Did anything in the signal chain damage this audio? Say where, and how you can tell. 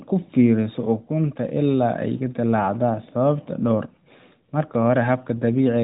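No, nothing in the signal chain has damaged this speech. What can be heard of the path is the AMR narrowband mobile codec at work, with nothing passing above about 3.8 kHz and only light coding texture, which fits its top 12.2 kbps mode.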